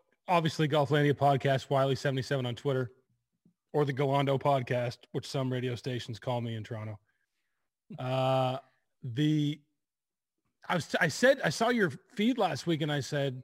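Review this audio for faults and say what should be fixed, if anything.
A crude rate conversion runs through the whole clip: samples were dropped or repeated to change the rate, with no filtering, and the pattern of the errors fits a conversion from 48 kHz to 44.1 kHz. Those skipped and doubled samples leave a distortion about 30 dB below the speech, a gritty, inharmonic fizz unrelated to the voice's pitch that rides on the louder and brighter sounds from start to finish. Preventing it means resampling with a proper band-limited converter rather than nearest-sample picking.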